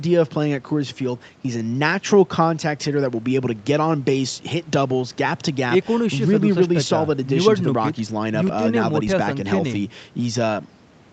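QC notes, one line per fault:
No faults heard anywhere in this speech recording.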